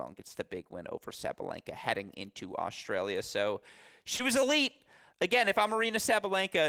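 At about 4.17 s there's a short concealed packet loss: roughly 20 ms of the speech didn't reach the decoder in time. The receiver patched that gap by stretching the preceding sound before easing back into the real signal, so you hear a quick smear.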